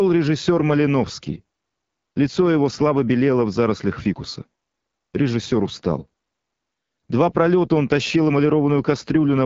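From start to finish the speech has been through the AMR wideband (HD Voice) codec at a low rate, which fits about 8.85 kbit/s. The pulse-driven vocal tract model is starved of bits, so the speech comes out rough and raspy, with nothing above 7.5 kHz.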